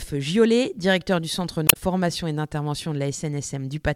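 At 1.66 s, damaged data in the compressed stream breaks the audio for about 0.11 s, until 1.77 s. The decoder misreads the corrupted frames and loses sync, producing a brief disruption. A spectrogram shows a short interruption; the waveform shows an abrupt discontinuity.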